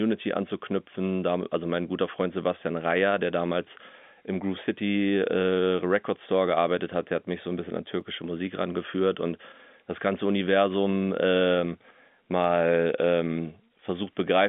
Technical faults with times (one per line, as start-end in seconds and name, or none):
8.01 dropped samples
12.44 dropped samples